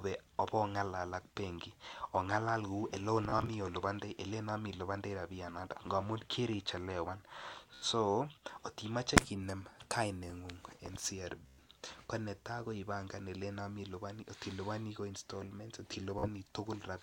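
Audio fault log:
3.29–3.48 s, 7.74–7.85 s, 11.46–11.58 s (before "ko netai ko ipangan"), 16.19–16.28 s (after "iliponi ko installments"): Bluetooth stutter. Late or lost packets made the receiver replay its last short slice, costing about 46 to 122 ms each, with the longest run 30.5 ms in the first. The result is a machine-gun buzz, and the sound then resumes further on. A waveform shows identical short cycles repeating, and a spectrogram shows vertical striping.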